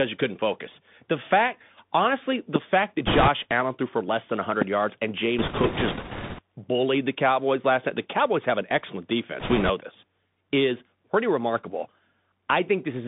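Throughout, the audio has passed through a Bluetooth CVSD headset codec. A one-bit delta modulator with an adaptive step size codes the signal, which fits a 64 kbit/s headset link, and the line passes only about 150 Hz to 3.6 kHz. The speech sounds boxed-in and narrow. Loud, bright syllables outrun the step size and smear. S sounds turn scratchy, and a granular hiss sits beneath everything, plainly audible.

At 2.56 to 2.58 s, between "fact honestly" and "fact that", a loud pop strikes. A sudden voltage step, likely a switch, plug or static discharge, was added to the signal and shaped by the circuits after it. It is heard as one sharp crack peaking about 20 dB above the speech, which carries on underneath.

From 3.07 to 3.29 s, just after "fact that", bit errors on the Bluetooth voice link set in. Flipped bits in the CVSD stream each nudge the waveform by only one small step, and the decoder forgets them quickly, so there are no hard clicks. 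Instead a rushing, crackly noise rides over the speech, fairly heavy here at around a 10% error rate.

A second loud pop follows at 3.51 to 3.53 s, a single crack peaking about 15 dB above the speech. A third, also about 15 dB, lands at 4.62 to 4.64 s, between "threw for less than" and "yards and".

Further bit errors give the same crackling rush from 5.39 to 6.41 s and from 9.40 to 9.70 s. These are a little lighter, at roughly 7% of bits flipped.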